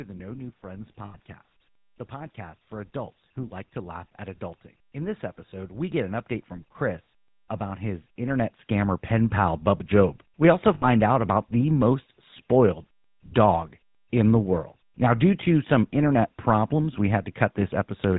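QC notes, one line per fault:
Throughout: GSM full-rate codec. The speech carries a buzzy, gravelly roughness from a coder that models the vocal tract and drives it with a sparse, regularly spaced pulse excitation, and the damage is plainly audible. Nothing survives above 4 kHz, which fits the 13 kbps full-rate coder. Unlike plain band-limiting, the harshness sits inside the voice itself.
1.04 to 1.17 s and 10.74 to 10.84 s: lost GSM frames. The sound freezes into a rough, metallic ring for about 0.13 s, then about 0.10 s, just before "out about the most" in the second case. Missing frames were filled by repeating the last good frame's settings, which fits five and four lost 20 ms frames. Unlike a dropout to silence or a clean stutter, the sound hangs and rings.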